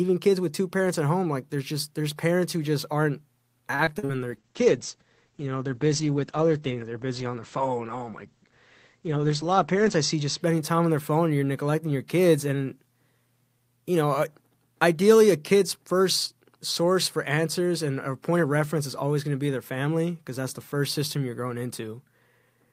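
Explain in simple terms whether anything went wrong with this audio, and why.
Three things went wrong. From 3.75 to 4.11 s, right after "parents who just aren't", repeated packet loss leaves five short holes patched with stretched sound, so it turns choppy with pieces missing rather than just going silent once.

From 4.33 to 10.47 s, ending before "time on their phone", a call bitrate drop makes the speech muffled and watery, with the treble cut off above about 8 kHz.

From 9.02 to 9.33 s, a jitter buffer speed-up trims about 50 ms, so the speech hurries by about 13% while the pitch stays the same, unlike a sped-up recording.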